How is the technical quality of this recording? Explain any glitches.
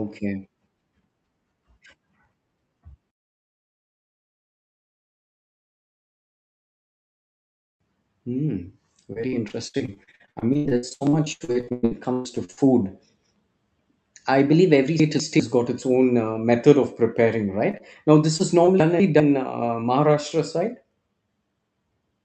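The recording is speech carried over a call link, with the sound topping out around 8 kHz. It has clear network glitches in three forms.

Repeated packet loss (robotic sound), 9.13–12.59 s: Many short dropouts, the longest about 0.12 s, are patched by extending the previous sound. Roughly two fifths of the stretch is filled in this way, so it sounds choppy.

Chunks out of order, 15.00–15.40 s and 18.80–19.20 s (the second just after "this is"): A 0.2 s block plays one block too late. Nothing is lost, but the sound jumbles briefly.

Short concealed packet loss, 17.71–17.75 s and 17.77–17.82 s (just after "uh method of preparing"), 18.38–18.41 s, and 18.65–18.69 s (after "this is"): About 20 ms goes missing each time. The decoder fills the hole by continuing the last sound, which leaves a brief smear or wobble.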